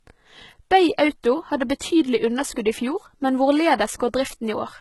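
Low-bitrate audio saved at a high bitrate runs throughout the speech. Nothing sounds above 11.8 kHz, and the artefacts of a very low-bitrate encoding remain. This points to something like 16 kbit/s HE-AAC, likely re-saved as high-bitrate MP3, which cannot restore the lost detail.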